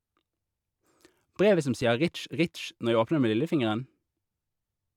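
Underrun with held sample at 1.82 s: the buffer ran empty for 1.5 ms, the converter froze on its last value, then speech resumed where it stopped, ending with only a soft click.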